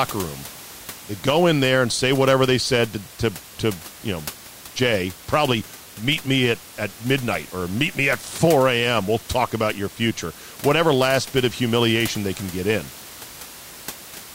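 No technical faults are audible.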